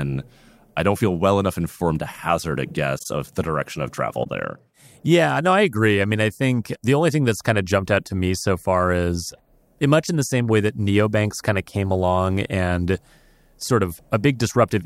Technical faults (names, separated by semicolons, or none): corrupt frame concealed